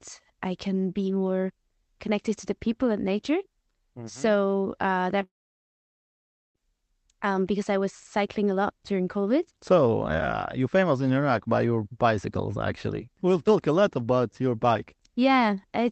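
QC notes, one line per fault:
5.23–6.58 s, long network dropout: incoming audio likely stopped; the last sound smears into a fading buzz, then silence, and about 1.3 s of speech is lost.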